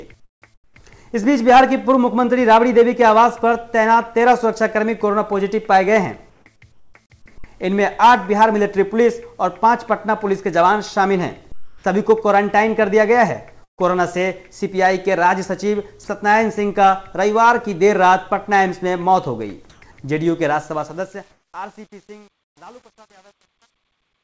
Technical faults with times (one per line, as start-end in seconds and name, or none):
0.20-0.76 comfort noise in place of the background
0.74-0.76 onset clipped by the voice detector
6.30-6.94 comfort noise in place of the background
11.52-11.84 comfort noise in place of the background
13.64-13.80 burst of packet loss
16.04-16.08 sound dropped by the voice detector
19.70-19.82 comfort noise in place of the background
20.46-24.24 truncation distortion on a fade
21.32-21.54 comfort noise in place of the background